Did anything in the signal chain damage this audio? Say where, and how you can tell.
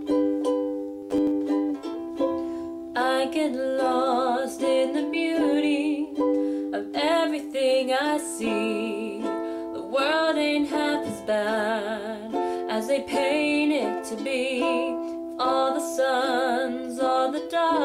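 Yes. Robotic sound from repeated short buffers runs from 0.99 to 1.31 s: a rigid 100 Hz buzz, likely a starved buffer looping about 10 ms chunks.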